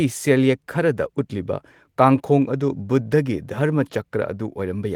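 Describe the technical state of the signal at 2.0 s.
At 2.0 s the audio is intact, with no dropout, distortion or other fault, and the Opus voice compression in its fullband hybrid mode leaves only light coding traces there.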